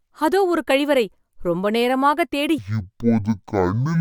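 Speech, where from 2.58 s to the end the stereo is read as mono: interleaved left and right samples are taken as one channel, so the sound plays at half speed and an octave (12 semitones) low, with a fainter mirrored copy in the upper spectrum.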